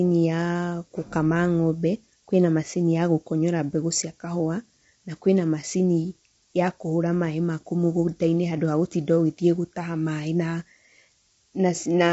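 From start to finish there's a switching supply whistle: a thin high tone wandering between about 10.1 and 13.2 kHz, sitting roughly 25 dB under the speech, from a power supply running in an audible burst mode or beating with another one. Running alongside it the whole way, the speech sounds rough and grainy with nothing above 7.8 kHz, which is most likely low-delay AAC compression (AAC-ELD) at a low bitrate, something like 24 kbps.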